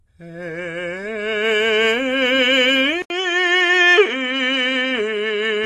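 From the first moment, the music is dull and smeared. Nothing is heard above 12 kHz. Sustained tones waver and the top end has a fizzy, watery grain. The damage is plainly audible. This is likely AAC compression. The encoder quantises each frame's frequency lines coarsely and drops the highest band to save bits. The sound fits AAC-LC at a low rate, around 32 kbps.

At 3.02 s the sound drops out for about 80 ms. When it returns, it is narrower and boxier. Nothing now reaches above 8.8 kHz, and a new, faint noise floor sits roughly 50 dB under the music. The level barely changes. This is likely an input switched to a poorer device. The recording jumps to another microphone or a headset's call profile, with a tighter band and its own hiss. That duller sound holds until the clip ends at 5.66 s.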